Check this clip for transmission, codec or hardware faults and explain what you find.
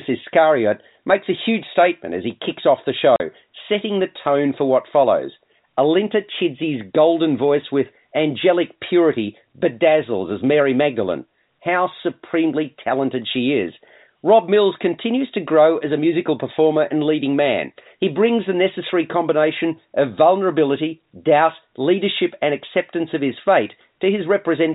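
There's one clear transmission fault. At 3.16 to 3.2 s there's packet loss filled with silence: a 40 ms hole, which fits two 20 ms packets dropping out, with the receiver playing silence and leaving hard edges. Under that, the speech comes through G.711 telephone coding, so the band stops at 4 kHz.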